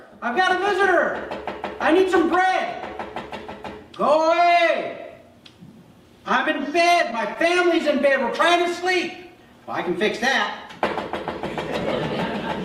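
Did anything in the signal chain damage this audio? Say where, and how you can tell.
Yes. Scattered short gaps appear between 7.11 and 8.27 s, a network-stage fault: about seven tiny dropouts, none much beyond 15 ms and roughly 50 ms in all, each bridged by the receiver extending the preceding sound, leaving ticks and smears in otherwise continuous audio.

A jitter buffer slow-down follows from 8.58 to 9.91 s, in the receive buffer. To rebuild its reserve, the receiver repeated short periodic segments, adding 69 ms and running the audio at 95% speed without any pitch drop, so sounds stretch slightly.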